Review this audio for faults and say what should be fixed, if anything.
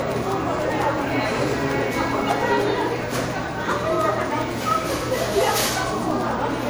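Generation loss, throughout: the whole recording sounds swirly, hollow and smeared, and sharp onsets lose their edge. The likely cause is repeated MP3 encoding, several passes at around 96 kbit/s. Each decode and re-encode lands on a slightly different frame grid and quantises the sound again, so noise and spectral gaps build up beyond what one pass at that bitrate would leave. Prevent it by editing from a lossless master and encoding to MP3 only once, at the final export.

Periodic USB or driver dropouts, from 0.12 s to 6.61 s: a short tick repeats every 0.1 s, around seventy in all, and is heard only where there is signal. At each tick, roughly a millisecond of sound is lost and replaced by silence. The steady spacing points to a background task that stalls the USB bus or audio driver on a fixed cycle, so the audio stream misses its deadline at the same interval each time. Prevent it by finding and disabling that polling task or power-saving feature, or by giving the interface a larger buffer and a dedicated USB port.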